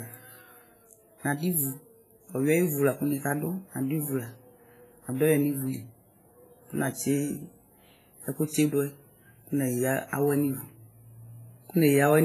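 From start to finish the speech carries heavy transform-codec damage, likely WMA compression at a low bitrate, consistent with roughly 24 kbps. Quantisation noise smears across long blocks, so consonants ring and blur while a hiss swells and fades with the level of the speech. On a spectrogram the content stops sharply near 15 kHz, and weaker upper components break into patchy, flickering islands with gaps where they were zeroed. The waveform shows pre-echo fuzz ahead of sharp onsets.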